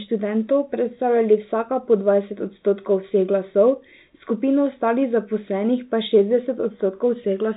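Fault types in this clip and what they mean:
No faults detected in this clip.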